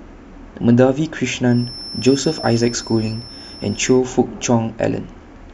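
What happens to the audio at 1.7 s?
At 1.7 s a feedback whistle sits behind the speech, from 1.43 s to 4.04 s. It is a thin, steady tone at 5.3 kHz, well below the speech level and swelling and fading slowly in level. The likely cause is a loudspeaker-to-microphone loop held just short of runaway feedback.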